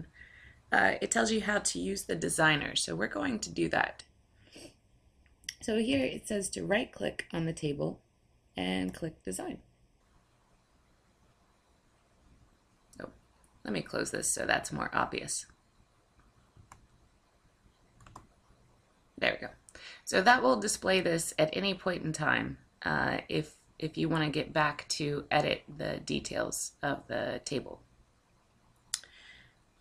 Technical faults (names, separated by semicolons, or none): channel delay (comb filtering)